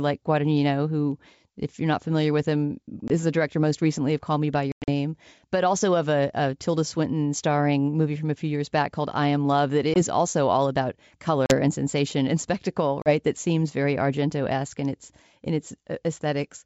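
Packet loss on an ADPCM call punches hard-edged holes at 3.08–3.11 s (after "not familiar with him"), 4.72–4.89 s, 9.94–10.03 s, 11.46–11.55 s and 13.02–13.11 s. The decoder's predictor loses step, so speech resumes slightly distorted.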